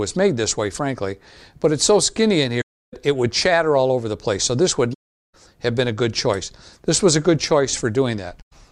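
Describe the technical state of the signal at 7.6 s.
At 7.6 s the signal is intact, with no technical fault present at that point.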